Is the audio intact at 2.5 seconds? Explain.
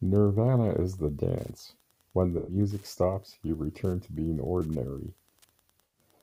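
No. From 2.37 s to 2.56 s the speech is replaced by AAC frame loss with concealment. Roughly 0.11 s of coded audio, consistent with about five lost frames, never reached the decoder, so it rebuilt the gap from the last good spectrum with randomised phase and smoothed energy. The result is a smeared, noisy, phasey patch rather than silence, since the gap is too short for the concealment to fade out.

The speech at 2.5 s also carries Wi-Fi interference, present throughout the clip. A nearby Wi-Fi radio's beacon, repeating every 102.4 ms, is rectified by the audio circuit and heard as steady ticking close to ten times a second, sitting about 35 dB below the signal.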